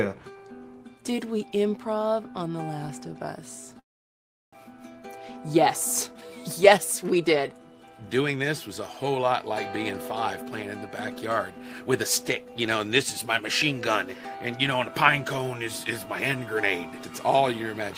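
At 3.79 s the sound breaks off. A brief buzzy continuation of the last sound fades out, and then there is near-silence for about 0.7 s until the audio resumes at 4.65 s. Roughly 0.6 s of material never returns, so the sound picks up further along. This is a long network dropout, likely caused by packets failing to arrive for an extended stretch. The receiver first concealed the gap by extending what it last had, then gave up to silence, and it came back with the timing shifted by around 150 ms.

From 6.64 s to 7.59 s the audio runs slightly fast, at about 106 percent speed, with its pitch unchanged, which gives a faintly hurried feel. This is a jitter buffer speed-up. After delayed packets arrived in a bunch, the buffer held more audio than its target. The receiver worked that surplus down by repeatedly cutting out tiny pitch-period-sized slices, removing around 70 ms in total across that second.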